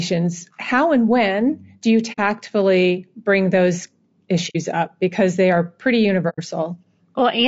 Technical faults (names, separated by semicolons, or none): low-delay AAC compression; AAC frame loss with muting